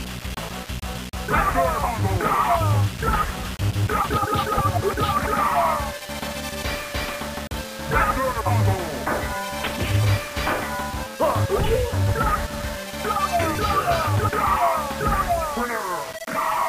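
From the start to the end, the whole clip carries grainy distortion that tracks the sound itself, with the error sitting only about 15 dB below the signal. That's likely low bit depth without dither: it sounds like around 5 bits, rounded, so quiet passages go gritty or denser stretches turn into a near-steady hiss.

At 11.30 s there's a repeated buffer: a tiny chunk of about 1.45 ms, which fits a 64-sample buffer, plays one extra time with a hard join because fresh audio didn't arrive in time. At that size it comes across as a click or brief buzz, with essentially nothing lost.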